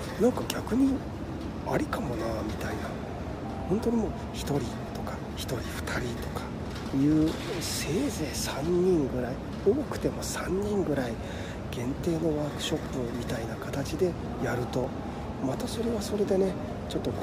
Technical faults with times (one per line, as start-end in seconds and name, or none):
2.89 overlap between stream segments
4.89 overlap between stream segments
10.87-10.89 overlap between stream segments
12.86 overlap between stream segments
14.84 overlap between stream segments